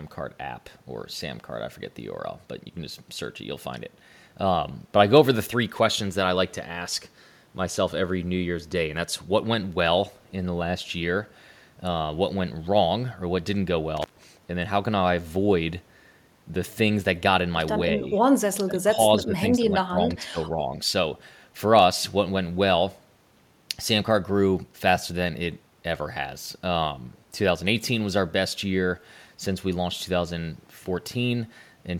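At 13.97 s a loose cable or plug momentarily breaks contact, an intermittent contact fault. The connection stays open for about 127 ms before it settles at 14.24 s. The sound cuts out abruptly, with crackle at the moment the contact opens and again as it closes, and faint hiss fills the gap. The crackle comes from the conductors scraping apart and back together.

From 18.51 s to 18.98 s, and again from 19.17 s to 20.72 s, the speech sinks in level in uneven stretches. The likely cause is speech suppressed in double talk: with both ends talking at once, the echo canceller can no longer tell the local talker from the returning loudspeaker echo, so it pulls both down together. The first stretch loses about 0.4 s of speech, dropping by roughly 25 dB at its deepest. The second stretch is shallower, at roughly 15 dB, with about a second affected in total.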